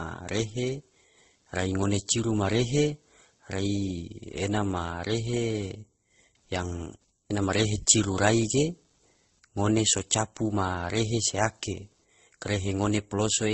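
A faint buzzing chirp, pulsing at around 150 times a second and sitting roughly 45 dB below the speech, runs under the whole recording. It rises and falls with the computer's workload, not with the speech. This is computer activity noise: processor, graphics or mouse load shifts the ground shared with the audio circuit.

Throughout, the speech is dulled, with nothing above 8.1 kHz. It carries two overlapping layers of artefacts, heard together. The likely cause is transcoding between lossy codecs, which fits an MP3 at around 32 kbit/s re-encoded to Opus at around 16 kbit/s. The second encoder spends its small budget on the first one's damage and adds its own, and the lower cut-off remains.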